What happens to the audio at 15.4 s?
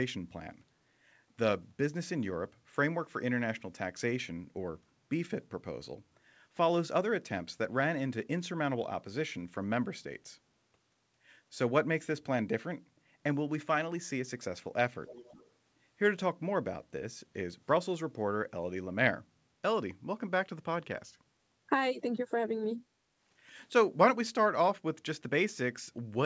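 At 15.4 s there is an echo leak, running from 15.06 to 15.5 s. A faint copy of the speech returns about a third of a second (336 ms) after the original, well below the direct voice. The cause is likely a far-end loudspeaker whose echo canceller let part of its microphone pickup through. On a spectrogram, the same harmonic pattern reappears weakly, shifted right by about 0.34 s. The waveform shows a low-amplitude trailing copy.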